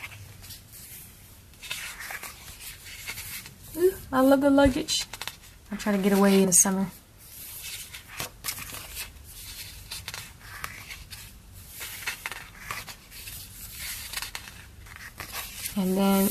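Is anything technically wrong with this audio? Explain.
Yes. At 6.43 s, compressed frames are skipped: whole frames never reach the output, so the audio jumps ahead by about 50 ms. The join is a brief jump in the audio, not the silent gap of a dropout.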